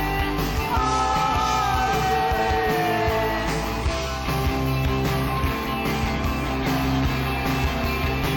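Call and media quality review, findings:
Nothing stood out on listening, and there is nothing to raise for this one.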